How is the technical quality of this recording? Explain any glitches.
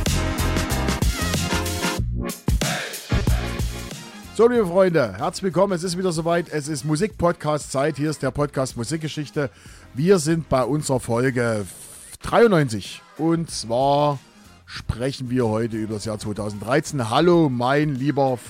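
One glitch is audible, a repeated buffer. From 3.19 to 3.21 s, a tiny piece of sound, about 5 ms long, plays four extra times. New audio arrived late, so the device replayed its last buffer. The piece is very short, so the hard joins come across as a brief click or buzz. Nothing seems to be lost.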